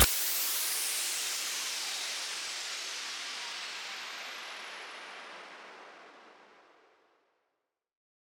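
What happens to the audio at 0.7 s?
Nothing goes wrong at 0.7 s; the audio plays through that moment intact, with no dropout, click or distortion.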